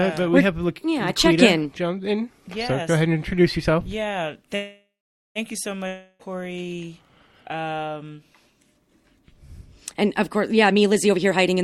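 A call audio freeze at 4.55 s stops the sound: the last moment is stretched into a fading buzz, then about 0.47 s of silence, and at 5.38 s the audio resumes exactly where it stopped. Roughly 0.8 s of delay has been inserted and nothing is skipped, the likely result of packets held up in transit while the jitter buffer ran empty. On a spectrogram the final spectrum is smeared sideways into a dimming horizontal band, followed by a blank column. In the waveform, a decaying repeated cycle flattens to a line. Half a second later, at 5.87 s, a long network dropout of 0.32 s follows a similar fading continuation, but almost no silence is left before the sound returns at 6.22 s. It does not resume from the same point: that stretch of audio is gone, most likely because it never reached the receiver, so the spectrogram shows a smeared, fading patch ending in an abrupt discontinuity where the pattern jumps ahead rather than picking up where it left off. 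From 10.57 s to the end, a jitter buffer speed-up plays the audio at about 122% speed with the pitch unchanged, removing around 0.3 s in total. The receiver trims short pieces a pitch period or so long, over and over, to work off excess buffered delay. This leaves harmonic lines at their normal heights while events crowd closer together in time, and the waveform shows periodic cycles quietly dropped out.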